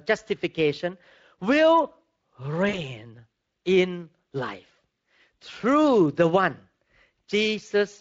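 VoIP packet loss concealed by the speech codec, from 2.69 to 2.84 s in this speech clip: about 40 ms of audio went missing, which fits two lost 20 ms frames. The decoder filled the gap by extending its last pitch and filter state at falling gain, so the voice briefly smears into a stretched, fading sound and stays weak until the codec state recovers. The Speex coding around it adds only light damage.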